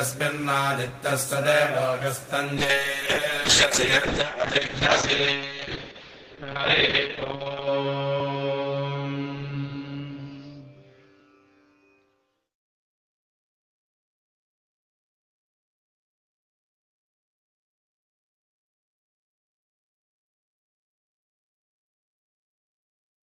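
From 2.58 s to 14.37 s the audio goes through a call bitrate drop. The encoder's bit budget collapses, and the degradation fits a fall from around 32 kbps to roughly 7 kbps. The coded bandwidth shrinks from 20 kHz to 8 kHz, so the top end goes dull and muffled, and the coarser coding leaves a rough, watery texture. The worst stretch holds for about 5.1 s before quality climbs back by 14.37 s.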